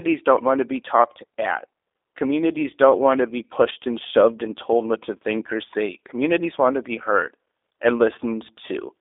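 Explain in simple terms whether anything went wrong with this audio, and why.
G.729 codec damage runs through the whole recording. This phone-call coding rebuilds the speech from a rough model of the mouth and a few pulses, discarding everything above about 3.7 kHz, so the voice sounds muffled, slightly rough and synthetic from start to finish.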